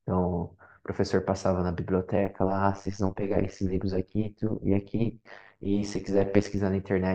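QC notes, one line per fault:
2.25–6.59 s, overlap-add ripple: level pumps about 60 dB each frame, around a hundred times a second. Mismatched frame overlap causes a metallic buzz with extra tones on the speech.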